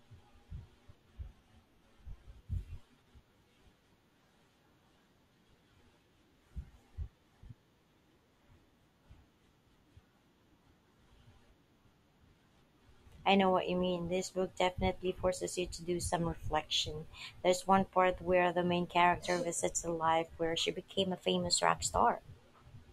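At 16.16 s the speech suddenly drags: for about half a second, to 16.67 s, it runs 6.42% slow and drops roughly 115 cents, just over a semitone, then snaps back. From 20.75 to 22.32 s the opposite happens, 6.42% fast and about 108 cents sharp. That's likely a drift correction step, where clock-matching software changes the playback rate in one jump to refill or drain its buffer, so speed and pitch move together.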